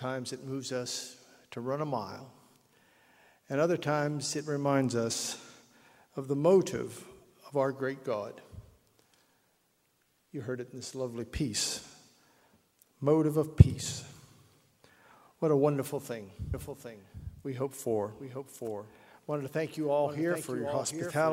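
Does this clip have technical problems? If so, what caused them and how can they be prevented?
Yes. From 16.54 s to the end, a doubled audio track appears: a second full-band copy, about 5 dB quieter, enters abruptly about 0.7 s behind, with no decay or room colour. The likely cause is a second, slower capture path. Route the source through one path only.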